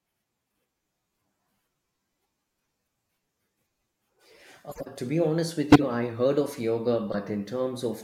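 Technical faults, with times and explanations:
4.69–4.87 s, 5.72–5.84 s and 7.12–7.15 s: corrupt frame decoded. Short chirpy, noisy bursts just before "to be honest", just before "I heard of yoga", and right after it. Damaged compressed frames got played anyway, so misread gains splash energy into the wrong frequencies.
5.61 s: dropped samples. A single sharp click, a thin line straight up the spectrum. Likely a few samples went missing, well under a millisecond's worth, so the waveform jumps abruptly to a later value without any sound actually being lost.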